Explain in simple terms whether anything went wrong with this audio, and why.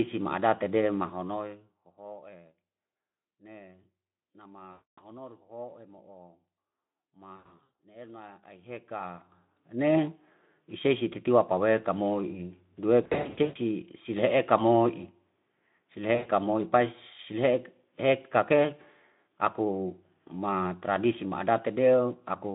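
Yes, four short stretches suffer VoIP packet loss concealed by the speech codec: 4.71 to 5.03 s, 7.35 to 7.70 s (just before "ne elna"), 13.03 to 13.58 s, and 16.15 to 16.29 s. Pieces of the call went missing, and the decoder filled them by stretching the last sound into a buzzy or noisy, fading smear. The voice stays weak or distorted for a moment after each one. In the middle two, the losses came in scattered bursts.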